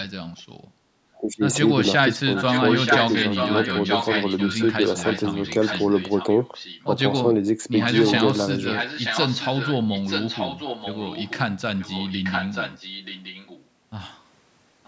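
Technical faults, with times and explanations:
1.18–1.43 s and 2.18–2.25 s, speech suppressed in double talk: the speech abruptly sinks, by about 20 dB in the first stretch and by roughly 25 dB in the brief second one, then recovers. The likely cause is that the far side was talking at the same moment, and the echo canceller, unable to separate local speech from loudspeaker echo, turned everything down. Unlike a dropout, the sound is attenuated rather than silenced.
2.35–6.97 s, 7.79–8.21 s, 8.69–11.4 s, 11.79–13.66 s and 14.84 s to the end, echo leak: a second copy of the speech trails the original by 930 ms. It sits only about 5 dB below the speech in the longest stretches, about 10 dB below in others, and is barely audible at the very end. This is likely a loudspeaker echo the canceller failed to remove. The long, fixed delay marks it as returned audio rather than room reverberation.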